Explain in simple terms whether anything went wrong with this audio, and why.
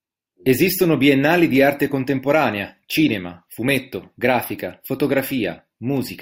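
From 0.3 s to 5.97 s there are sharp ticks, about three per second. These are word clock ticks. The receiving device ran on its own clock, slightly out of step with the sender. Each time they slipped, one sample was lost or doubled.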